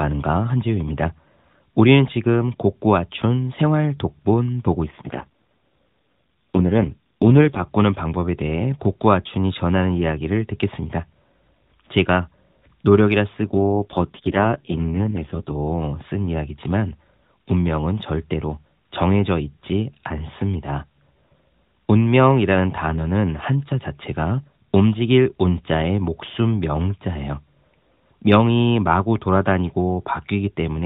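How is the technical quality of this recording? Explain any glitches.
The recording is narrowband mobile speech, cut off above 4 kHz by the AMR narrowband codec, and it has two stretches of audible degradation. An AMR rate drop occurs from 4.84 to 7.64 s and again from 13.42 to 15.56 s. The network pushes the codec to a lower rate, which fits a drop from 12.2 to 4.75 kbps. Fewer bits describe the voice, so it turns buzzy and synthetic, then recovers, with no gap or band change.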